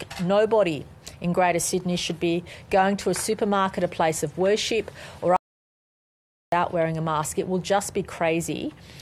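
At 5.36 s the sound cuts out to total silence until 6.52 s, about 1.16 s of audio dropout to silence, likely from lost input while recording continued.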